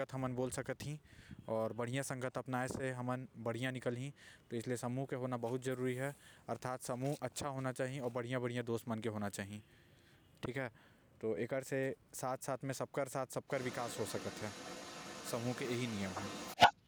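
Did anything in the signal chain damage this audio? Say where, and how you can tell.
Yes. Echo leak at the call-processing stage, 13.47 to 16.75 s: a distinct copy of the speech returns 388 ms late, around 10 dB down. That is likely loudspeaker pickup the echo canceller missed, unlike diffuse room reverb.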